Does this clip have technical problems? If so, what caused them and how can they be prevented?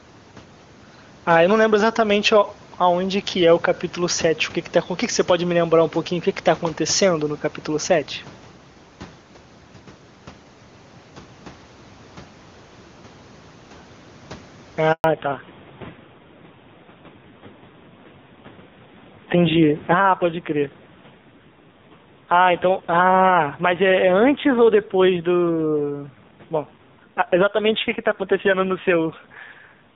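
Yes. Gain pumping runs through the whole clip: the gain swings by about 10 dB, pulling down under each loud syllable and squashing the dynamics. This is likely caused by input gain set far too high, with a fast limiter or compressor pulling it back on every peak. Setting the microphone gain lower, so the limiter rarely engages, prevents it.

A handover gap occurs from 14.92 to 15.04 s. The audio fades out within a few tens of milliseconds and stays silent for 120 ms while the call switches networks and no speech frames arrive. Whatever was said in that window is lost. Keeping the handset stationary in steady coverage, or using a network with seamless handover, avoids it.

Fallback to narrowband follows immediately, from 15.04 s to the end. Everything above 4 kHz disappears and the sound turns duller and rougher. It is consistent with a drop from AMR-WB at about 23.85 kbit/s to low-rate AMR-NB around 5.9 kbit/s. 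Ensuring both networks support HD Voice end to end prevents the downgrade.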